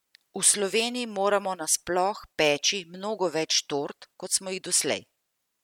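Nothing technically wrong can be heard in this speech recording: the signal stays continuous and stable throughout, with no audible fault at any point.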